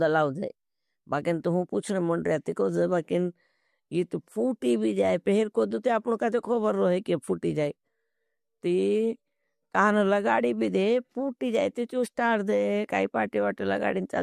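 No dropouts, clicks, distortion or timing faults turn up anywhere in the recording.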